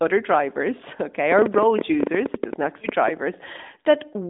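From 1.32 to about 3.09 s there's a train of clicks: roughly twenty sharp, similar pops at an uneven pace, about 10 a second, some peaking about 15 dB above the speech. They tick through the pauses too, likely interference from nearby equipment or a faulty connection.

Riding on top of that, at 2.80 to 2.87 s, you get one lost AMR speech frame. The decoder patched a 20 ms hole by repeating its last good settings at lower gain, so there's a quick dip or warble before the speech picks back up, a touch weak. The call band sits around 200 Hz to 3.7 kHz, which fits AMR-NB at its 12.2 kbps mode.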